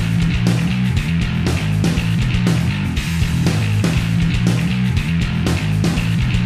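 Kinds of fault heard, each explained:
No technical faults can be heard anywhere in the audio: the signal holds together without any break, distortion, dropout or interference.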